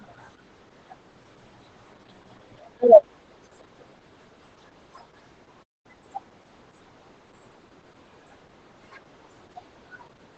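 Throughout, the speech carries Opus voice compression: the SILK coder has narrowed the band to about 8 kHz and coded the excitation coarsely, which fits roughly 10 kbps. The result is muffled, hoarse and faintly robotic, unlike MP3's swirly, metallic high-frequency artefacts.

At 5.63 s a playback stall cuts the sound off mid-flow for about 0.21 s, until 5.86 s. The player most likely ran short of data.

From 5.86 to 6.06 s comes a time-compressed catch-up. The player clears its backlog by removing and cross-fading small slices, so the speech runs at double speed. The pitch stays normal, which sets it apart from a simple speed-up.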